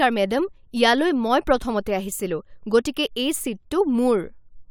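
No technical faults can be heard anywhere in the recording.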